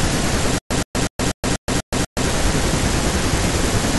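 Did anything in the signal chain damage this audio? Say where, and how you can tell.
Yes. From 0.58 s to 2.26 s there is a stutter with silent gaps: a 121 ms fragment of speech repeats seven times, each followed by 123 ms of silence, on a steady 244 ms cycle. The likely cause is a stalled playback buffer replaying its last block, and the intervening audio is lost.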